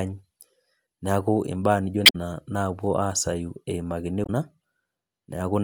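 At 2.03 to 2.16 s, just after "imbaa nijo", and again at 4.23 to 4.30 s, damaged data in a compressed stream makes the decoder misread frames and hunt for sync, giving a brief glitch in the speech.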